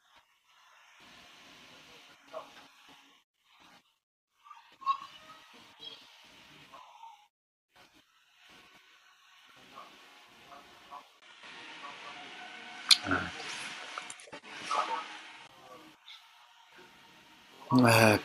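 It's a speech recording, and two things go wrong in it. From 11.2 s to 15.49 s the sound drops into a duller, boxier character. There's a short gap of about 20 ms at the change, then nothing above 11.4 kHz, a level shift of roughly 5 dB, and a new background noise sitting roughly 40 dB under the speech. That's most likely an input switched to a poorer device, probably another mic or a headset's call profile, before it switches back. Then at 17.53 s there's a quick stutter: repeated frames, with one 23.2 ms block played twice more than it should be. The repeat adds 46.4 ms to the audio and sounds like a single compressed frame being duplicated.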